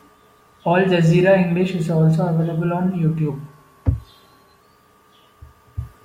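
From 3.29 s to 4.60 s, right after "is also available on", the speech runs 6.3% slow and sits 112 cents flat, just over a semitone, before snapping back. This drift correction step is likely a clock-matching resampler abruptly shifting playback rate to rebalance its buffer.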